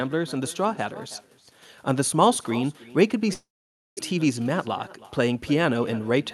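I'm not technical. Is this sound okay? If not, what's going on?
No. Echo with no canceller runs through the whole clip. The far end seems to play the call through a loudspeaker, its microphone picks it up, and nothing removes it. So every bit of speech returns about a third of a second later as a faint, thin copy.

Between 3.33 and 4.01 seconds the speech gives way to a buzzy continuation of the last sound. That fades into near-silence, and then the speech resumes with roughly 0.4 seconds of it missing. The likely cause is a long network dropout, where no audio arrived for that stretch.

Jitter buffer speed-up follows twice, from 4.12 to 4.58 seconds and from 5.26 to 6.21 seconds. The speech runs about 10 percent faster at the same pitch and sounds hurried. The receiver is trimming tiny slices of audio to catch up on the built-up delay.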